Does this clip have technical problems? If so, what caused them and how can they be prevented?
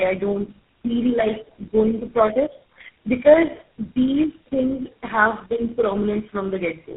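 Yes. Tandem speech coding runs through the whole speech clip. The call passed through four speech codecs in a row (GSM full rate, AMR-NB at 5.15 kbit/s, G.726 at 24 kbit/s, then GSM full rate again), with G.711 mu-law links between them. Each coder re-encoded the previous one's errors. Nothing remains above 3.7 kHz, which is normal for narrowband telephony. The speech sounds rough, muffled and warbly. A single low-rate codec would smear sound in one consistent way, but here the artefacts of several coders are stacked on top of each other. Preventing it requires transcoder-free operation or tandem-free signalling between networks, so the speech is coded only once from end to end.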